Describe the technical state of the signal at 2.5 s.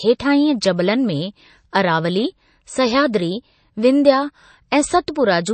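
At 2.5 s, as across the whole speech clip, the treble stops dead at 8.4 kHz and s sounds turn watery and swirly, with smeared attacks. This is likely MP3 compression starved of bits, which fits a rate near 32 kbps. Unlike a plain low-pass filter, it also makes weak frequency lines flicker on and off.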